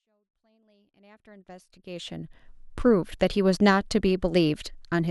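There are no technical faults to describe in time order; the speech simply fades in smoothly from the start until about 2.56 s.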